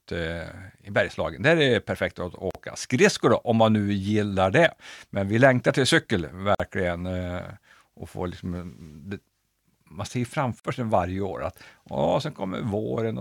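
Speech with gaps at joins of encoded pieces: silences at 2.51–2.55 s (after "är det perfekt att"), 6.55–6.60 s and 10.60–10.65 s, 41–49 ms, every 4 s, then resuming seamlessly, unlike random dropouts.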